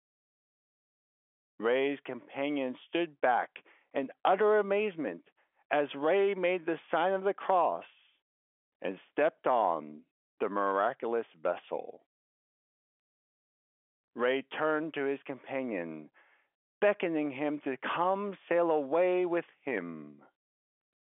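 No technical faults can be heard in the speech, which sits within the ordinary telephone band with nothing above about 3.7 kHz.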